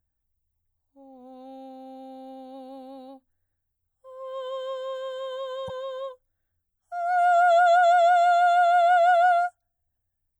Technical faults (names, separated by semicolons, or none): damaged data in a compressed stream